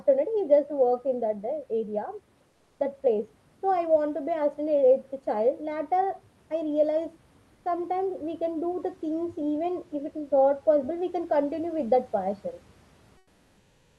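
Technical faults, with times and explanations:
2.49–2.79 s and 13.17–13.98 s, comfort noise in place of the background: during these pauses the room noise gives way to a smooth, featureless hiss about 4 dB quieter, likely from Opus discontinuous transmission. The gap never falls silent, as a dropout or gate would, and the noise's texture changes rather than just thinning.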